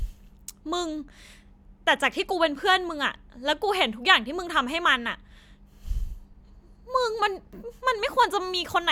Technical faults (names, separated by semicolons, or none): none